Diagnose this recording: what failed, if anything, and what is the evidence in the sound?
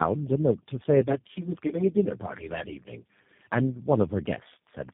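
Rough, muffled, warbly speech with nothing above 3.6 kHz throughout: tandem speech coding at the codec stage, re-encoded through AMR-NB, GSM full rate and finally G.729A.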